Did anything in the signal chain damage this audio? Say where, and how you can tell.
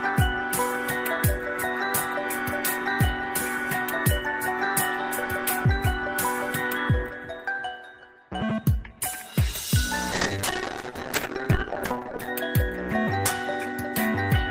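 Yes. From 10.15 to 12.39 s, a call bitrate drop in the codec: the sound turns coarse and muffled, which fits the encoder starving from 32 to 8 kbps.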